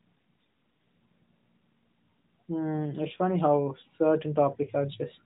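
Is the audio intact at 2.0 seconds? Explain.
Yes, the speech at 2.0 seconds is intact, carrying only the narrowband character of the AMR-NB mobile codec at 12.2 kbps, with nothing above 4 kHz.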